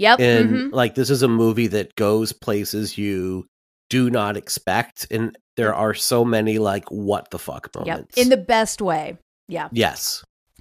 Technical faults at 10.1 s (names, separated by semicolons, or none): DAB burbling